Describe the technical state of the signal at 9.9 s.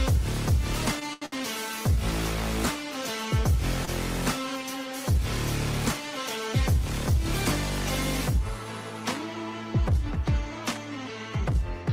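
At 9.9 s the signal is intact, with no audible dropout, distortion, glitch or other fault at that moment.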